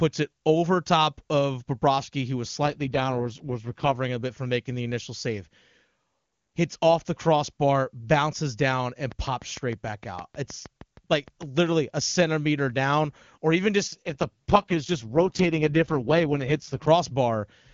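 Right after "who was", from 2.64 to 3.96 s, there's an AMR rate drop. The band stays just as wide and nothing cuts out, but the speech turns rough and buzzy-synthetic, which fits the codec falling from 23.85 to its 6.6 kbit/s mode. It clears by "a bit from making".

After "the crossbar bounces down", from 9.12 to 11.59 s, a train of clicks rides over everything: around fifteen same-shaped ticks at a steady 6.5 per second, peaking about 5 dB above the speech. Likely interference pulses from nearby gear.

The rate drop comes back after "centimeter down or even", running 13.87 to 16.88 s, with the same raspy, low-rate texture that again points to the 6.6 kbit/s mode.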